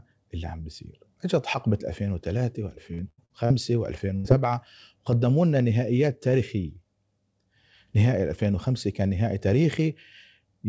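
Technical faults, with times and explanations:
2.94–3.52 s, repeated packet loss (robotic sound): Four separate dropouts strike within about half a second, taking out roughly 200 ms of speech in total, the longest hole 82 ms. Each one is papered over by stretching the preceding sound, so about a third of this span is concealment rather than real audio. That gives a choppy stutter. On a spectrogram the harmonics flatten into repeated, smeared horizontal bands. The waveform shows looped, over-regular cycles between genuine segments.
4.16–4.26 s, burst of packet loss: About 80 ms of consecutive speech is lost at once. The receiver fills the hole by extending the last sound and fading it, producing a brief held sound that dies away before speech resumes with that piece missing. The spectrogram shows frozen, decaying energy ending abruptly, all below the 8 kHz ceiling of the call's G.722 path. 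The waveform shows a repetitive envelope tapering down, then a sudden jump back into natural speech.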